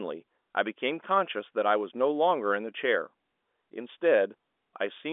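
No technical faults are audible.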